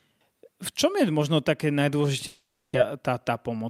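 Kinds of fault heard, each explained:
Long network dropout: Around 2.27 s the sound stops arriving and the receiver keeps stretching the last bit of it into a fading buzz, filling roughly half a second without going fully silent. About 400 ms of real audio is simply gone, and it picks up again at 2.77 s as if nothing was skipped. A stall in the network is the likely cause, and the playout delay grows by something like 70 ms.
Jitter buffer speed-up: Right after the gap, from 2.95 s to 3.64 s, the receiver is working off that extra built-up delay. It snips out tiny pitch-period-sized chunks over and over, so the speech runs at about 106% speed while the pitch stays put. Around 50 ms gets trimmed in total, which is enough to make that stretch feel slightly rushed.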